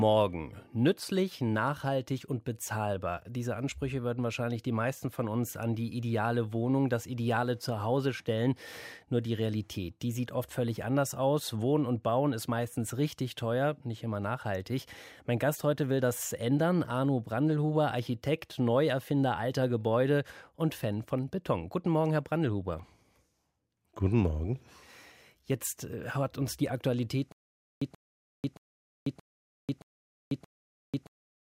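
A speech recording where, from 27.32 s to the end, playback likely stalls: stutter with silent gaps, a 131 ms fragment repeating six times every 624 ms, separated by about 493 ms of digital silence.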